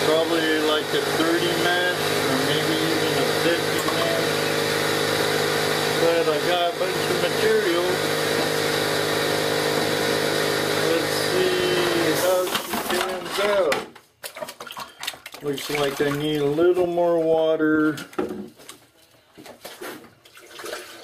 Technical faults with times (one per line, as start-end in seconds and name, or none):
none